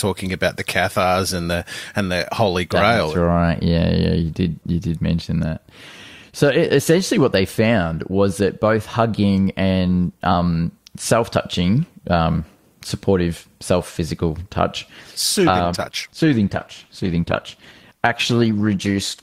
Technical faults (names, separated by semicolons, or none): adaptive stream at a lower bitrate